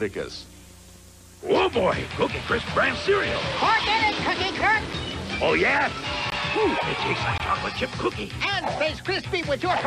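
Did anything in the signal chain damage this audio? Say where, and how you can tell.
Yes: a tick at 4.93 s and short holes at 6.30 and 7.38 s are blocks of digital silence, 5 and 20 ms of zeros where the buffer likely went unfilled.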